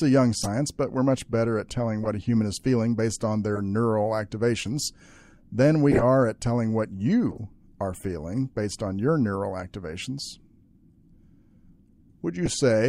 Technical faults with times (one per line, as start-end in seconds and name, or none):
0.41-0.49 corrupt frame decoded
2.03-2.08 corrupt frame decoded
3.56-3.60 corrupt frame decoded
4.79-4.88 corrupt frame decoded
5.91-6.03 corrupt frame decoded
7.31-7.38 corrupt frame decoded
10.19-10.22 corrupt frame decoded
12.45-12.48 corrupt frame decoded